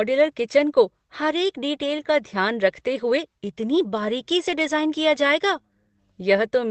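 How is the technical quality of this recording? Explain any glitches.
The speech has one glitch, a lost packet rebuilt from error correction, from 4.47 to 4.61 s. The Opus call path limits the audio to about 8 kHz. The decoder lost packets there and played the low-bitrate copies carried in the following packets, so there is no gap. About 80 ms of audio sounds briefly rougher and noisier, which fits four separate lost packets.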